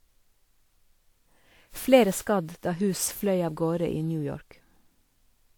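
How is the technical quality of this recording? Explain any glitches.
Generation loss runs the whole way: swirly, hollow, smeared speech with blurred attacks, likely from about seven passes through WMA, consistent with 128 kbit/s, each adding noise and spectral holes.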